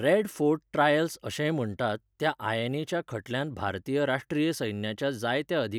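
No technical faults can be heard in the recording.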